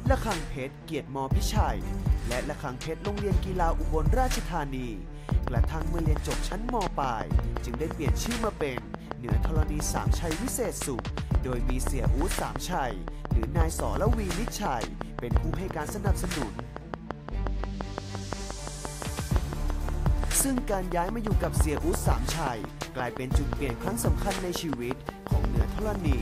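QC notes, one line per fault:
5.29–26.13 s, train of clicks: regular ticking at 5.76 per second, about a hundred clicks peaking roughly 15 dB above the sound, heard in pauses too, likely from interference or a faulty connection. Spectrogram shows evenly spaced thin vertical broadband lines, and the waveform shows matching spikes.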